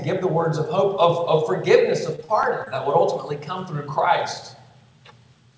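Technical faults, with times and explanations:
2.16 to 2.23 s and 2.25 to 2.30 s, short concealed packet loss: two quick smeared wobbles close together. About 20 ms and then 40 ms of audio never arrived in time. The decoder extended the preceding sound to cover each gap and blended back, and around 13 ms was trimmed after the first gap to catch up.
2.43 s, block of digital silence: a sharp tick. About 5 ms of audio cut out abruptly with no fade, likely because the output buffer was not filled in time, so the hole is too short to hear as a gap.
2.64 to 2.68 s, short concealed packet loss: a brief smear. Roughly 20 ms went missing and was covered by about 20 ms of sound continued from what came just before, before blending back into the received audio.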